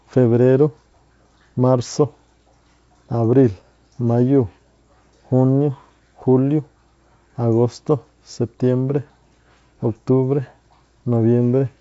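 Speech with no technical fault to be heard. The sound stops at about 7.7 kHz, as expected of G.722 wideband telephone coding, and the codec's own traces are faint at most, which fits its full 64 kbit/s mode.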